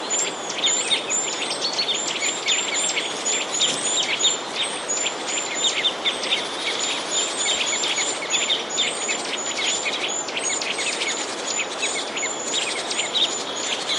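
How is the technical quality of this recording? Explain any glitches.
A faint, regular ticking runs through nearly the whole recording, from 0.23 s to 13.97 s. It recurs about every fifth of a second, around seventy ticks in all, and is easiest to hear under louder, sustained or bright passages. These are clock slip clicks. The likely cause is two devices running on separate, unsynchronised clocks that differ by something on the order of 100 ppm. Each time that drift adds up to a whole sample, a single sample is dropped or repeated, leaving a tiny discontinuity in the waveform.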